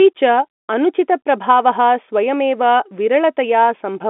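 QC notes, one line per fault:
No faults detected.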